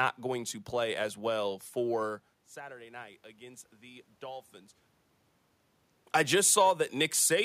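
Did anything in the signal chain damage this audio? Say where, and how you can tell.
Yes. Automatic gain rising, 2.54 to 4.84 s, just after "play as well for": in the call-processing stage, the input fell by about 17 dB, and the gain control answered with a slow lift of about 5 dB, so voice and room noise swell together over roughly two seconds.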